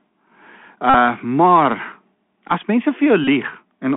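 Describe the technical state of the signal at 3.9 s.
At 3.9 s the speech is still carried by a Bluetooth CVSD headset codec, as it is throughout the clip. A one-bit adaptive-step delta coder, consistent with a 64 kbit/s stream, confines the sound to 200 Hz to 3.4 kHz, leaving it thin, muffled and plainly grainy.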